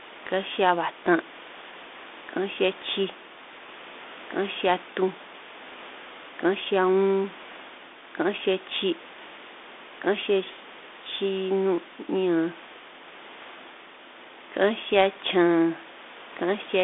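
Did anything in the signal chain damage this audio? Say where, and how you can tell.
No, nothing damaged this audio.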